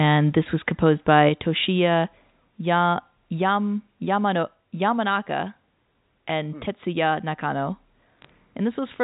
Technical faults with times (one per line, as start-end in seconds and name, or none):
1.29 microphone volume stepped down
2.31 microphone volume stepped down
8.19-8.30 bit errors on a digital phone line